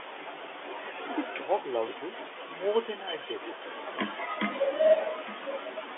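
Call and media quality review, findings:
Echo leak, 4.86 to 5.82 s: delayed copy of the speech coming back about 858 ms behind the original, sitting roughly 10 dB under it. Likely the far end's loudspeaker playback getting into its mic and slipping past the echo canceller, then sent back down the line. Heard through the narrow telephone band, roughly 300 Hz to 3.5 kHz, which fits 64 kbps A-law G.711 coding.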